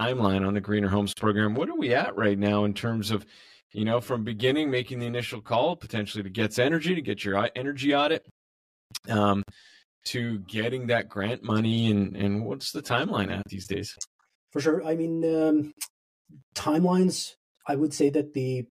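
Throughout the speech, channel delay (comb filtering) gives a hollow, phasey colour: one channel arrives roughly 10 ms behind the other, and when the two are summed to mono the shared content cancels at regular intervals, starting near 50 Hz and repeating about every 100 Hz. On a spectrogram this shows as fixed, evenly spaced dark horizontal bands running the whole length of the clip, unmoved by changes in the speech.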